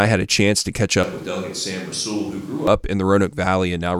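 From 1.03 s, after "a chance to catch", the speech turns suddenly roomy and hollow, about 10 dB quieter with thinner bass, until 2.67 s, before "up in": likely a switch to a distant microphone. The waveform shrinks, and the spectrogram's low end fades over a visible noise floor.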